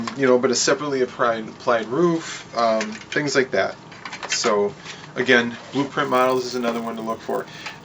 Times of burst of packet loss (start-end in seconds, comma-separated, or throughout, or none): none